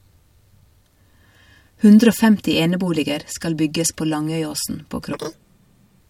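Speech clip with one fault near the end. From 5.13 s to 6.0 s, the audio is read two samples at a time, so it plays at double speed. The pitch jumps a full octave, 12 semitones. The reader treats each sample pair as one frame, as if expecting two channels or wider samples.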